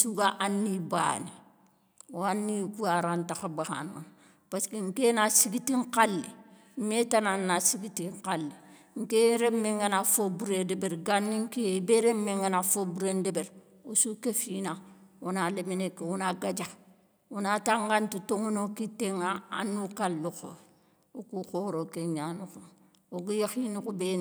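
No technical faults can be heard anywhere in this speech recording. Nothing in the signal path calls for comment at any point.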